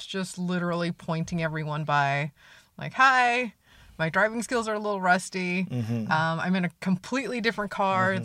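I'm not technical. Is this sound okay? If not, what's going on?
Yes, this recording sounds fine, and nothing in it suggests a technical problem. The speech comes through steadily with no interruptions or odd sounds at any point.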